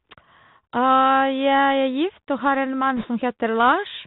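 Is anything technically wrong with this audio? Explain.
Yes, two faults. Throughout, the Bluetooth CVSD headset codec cuts everything above 4 kHz, which fits a 64 kbit/s link. Its one-bit adaptive steps leave scratchy sibilants and granular hiss, with the spectrogram ending flatly at 4 kHz.

From 2.97 to 3.07 s, bit errors on a Bluetooth voice link, at a few percent, add a brief rushing crackle without spikes, showing as broadband noise fill below 4 kHz.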